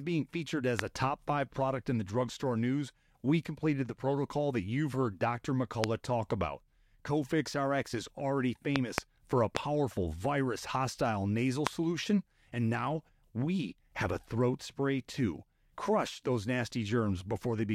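Loud pops occur at 0.79–0.81 s, 5.84–5.86 s, 8.76–9.00 s (two in succession), 9.57–9.59 s and 11.67–11.69 s. Each is a sharp thump roughly 25 dB above the speech, which continues underneath, likely from an electrical voltage spike such as a switch or static discharge.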